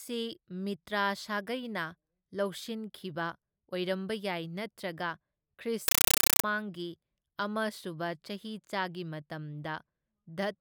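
At 5.88 to 6.44 s the speech turns into harsh, chattering static: a compressed stream played as audio, AC-3 data taken as samples, bursting 8 ms at 31.25 Hz.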